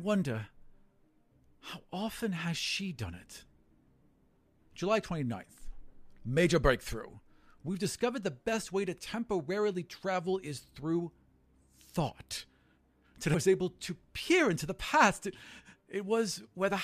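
At 13.33 to 13.35 s, damaged data in the compressed speech stream makes the decoder lose frame sync, giving a brief glitch as it searches for the next frame header.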